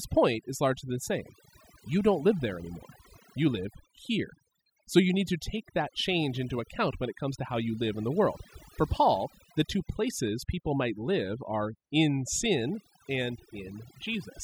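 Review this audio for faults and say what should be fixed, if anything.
Throughout the speech, the background drops and breaks up into twinkling specks: overdone noise removal, with frequency bands near the noise estimate cut away along with quieter voice detail. Set the noise reducer more gently, or capture a cleaner recording, so less of the voice is removed with the noise.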